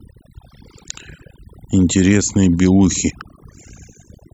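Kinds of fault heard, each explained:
Overdone noise removal: an over-aggressive noise reducer cuts bands near its noise estimate throughout, leaving near-silent gaps with twinkling specks and taking quiet parts of the speech with them.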